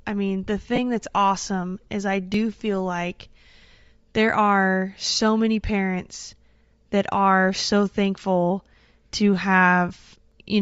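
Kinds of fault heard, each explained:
Bluetooth LC3 compression: The whole clip has that grainy, breathy sheen on the speech, most likely from LC3, the Bluetooth LE Audio codec. At a lowish rate, which fits around 32 kbps with 10 ms frames, the encoder throws away a good chunk of the upper spectrum and fills it back in with noise. That's why the top end sounds fizzy instead of crisp. The damage is plainly audible, not subtle.
Lost LE Audio frames: There are three little dropouts where the decoder had nothing to play and papered over the gap by recycling the previous spectrum with scrambled phase. You get a brief noisy smear instead of clean speech. The first is at 0.76 to 0.79 s, two frames or 20 ms. The second is a single 10 ms frame at 6.92 s. The last runs 9.88 to 9.91 s, right after "are so thankful to".
Audio missing between chunks: Three tiny skips sit almost exactly 4 s apart, at 2.34, 6.33 and 10.32 s. 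That spacing points to the recorder likely handling audio in 4 s blocks and dropping a sliver, around 15 ms, at each handover, with the two sides butted together. You can hear the jump between "that's awesome is I" and "feel like", and again between "are so many parents" and "that are so thankful".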